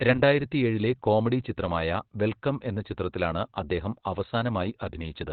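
A speech clip, muffled, hoarse and squeezed to narrowband throughout, likely heavy Opus compression in its SILK speech mode, which fits a rate around 12 kbps.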